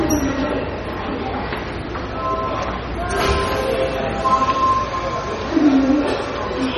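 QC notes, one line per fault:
Throughout, MP3 compression: nothing sounds above 12.7 kHz, and the audio is heavily watery and swirling. The likely cause is a bit-starved MP3 encoder, fitting roughly 32 kbps, that cuts treble at a fixed point and toggles weak frequency lines between frames.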